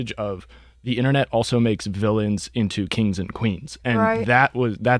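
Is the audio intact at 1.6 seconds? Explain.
Yes, the speech at 1.6 s plays through intact, with no dropout, click, distortion or other audible fault at that moment.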